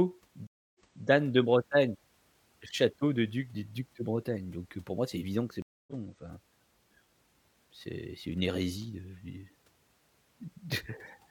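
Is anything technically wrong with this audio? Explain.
Yes. There are two stream reconnects. At 0.47 to 1.07 s the audio drops out for 278 ms, then resumes 325 ms earlier, repeating a moment. At 5.62 to 5.93 s a 252 ms gap returns about a fifth of a second later, skipping ahead. Each time the link broke, the player went silent and restarted its decoder mid-stream, so the returning sound fades in briefly.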